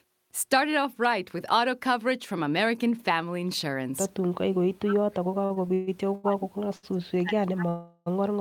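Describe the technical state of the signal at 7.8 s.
At 7.8 s the speech sits inside a call audio freeze running from 7.69 to 8.08 s. The stream stalls, and the last sound is drawn out as a fading buzz for about 375 ms rather than dropping to silence. When the sound resumes it picks up where it stopped, so nothing is cut out; the speech is simply pushed later. That separates it from a dropout, which removes a piece. The likely cause is packets delayed in transit that emptied the receiver's jitter buffer.

The same moment also falls within a longer stretch of speech suppressed in double talk, from 4.43 s to the end of the clip. Across that span the level sags and thins unevenly, at its deepest by about 40 dB, while the other side of the call is speaking. This is likely the echo canceller treating the talker as loudspeaker echo and turning both down. Unlike a plain fade or gain drop, the level pumps with the far side's activity rather than falling smoothly.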